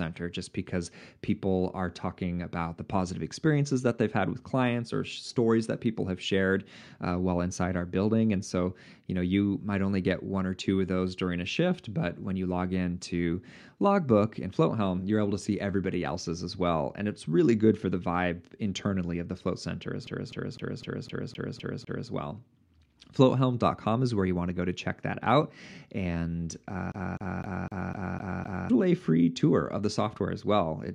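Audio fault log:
20.07–22.10 s, CD stuck on one turn: just after "the float center as", a 0.25 s fragment repeats eight times, each pass separated by a brief mute. A surface defect is throwing the pickup back one track at the same point every revolution, giving an even, rapid stutter.
26.92–28.70 s, CD stuck on one turn: after "check that out and", the same 0.25 s loop repeats seven times before playback resumes at "a free tour of".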